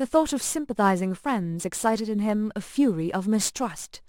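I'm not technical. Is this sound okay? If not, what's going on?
No. The speech has a crude rate conversion running from start to finish. The audio was resampled by simply picking the nearest existing sample instead of filtering properly, and the rhythm of dropped samples fits a change from 48 kHz to 44.1 kHz. That repeating slip adds stray tones unrelated to the voice, heard as a gritty, fizzy buzz that clings to the louder and brighter sounds.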